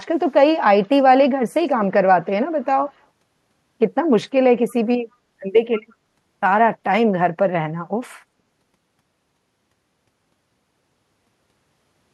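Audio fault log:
0.83–0.89 s, 2.23–2.27 s, 2.61–2.65 s and 4.70–4.75 s, echo leak: four tiny scraps of a delayed copy of the speech, trailing the original by 186 ms. They're very faint, roughly 35 dB under the speech, with the one at 2.61 s a bit stronger at about 30 dB down. Likely the far end is on a loudspeaker and its echo canceller let brief bits of its mic pickup slip back through.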